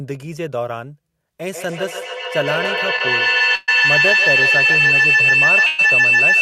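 From 1.53 s onward, a feedback howl builds near 3 kHz, with repeats roughly every 150 ms and peaking about 9 dB above the speech, as the loop gains level each trip. At 3.55 s and 5.66 s, call audio freezes stretch the last sound into a fading buzz for 126 ms and 123 ms, likely from a jitter buffer running empty. The speech then resumes with nothing lost, only delayed.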